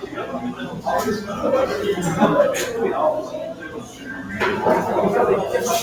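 A non-speech recording runs through a noise suppressor built for speech, and it stays engaged the whole time. The suppressor treats steady tones, ambience and reverb tails as noise to be removed. So the level keeps swinging, by roughly 10 dB. Onsets get through. Held parts and decays sink. The sound pumps and thins as the gain moves. There are also two spots of sound cut by the noise suppressor, from 0.00 to 0.84 s and from 3.52 to 4.30 s. In each, the suppressor mistakes the sound for noise and pulls it down by about 9 dB at the deepest point. Each dip lasts well over half a second. Sustained and fading material drops out most. Decays end early instead of ringing naturally.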